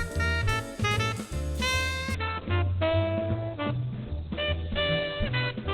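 Adaptive stream at a lower bitrate, from 2.15 s to the end: the stream drops abruptly to a much leaner encoding, with no gap. Everything above 4.4 kHz disappears and codec artefacts thicken, a dull, smeared quality consistent with a low-bitrate Opus stream.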